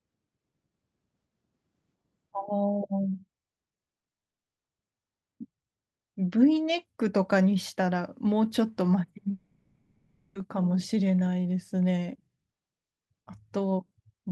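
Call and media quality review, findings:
Short concealed packet loss, 3.97 s, 4.00–4.03 s and 4.10 s: packets late to decoder, gaps of 10–20 ms filled by continuing the preceding sound. Audible as brief smears.

Long network dropout, 4.12–4.64 s: audio stops for about half a second and the gap plays as silence, likely a dropout with no usable concealment. At 9.31–10.36 s, roughly a second of sound is lost and replaced by a synthetic continuation, heard as a fading buzz or hiss before the real audio resumes. The call path's codec band-limits everything to 8 kHz.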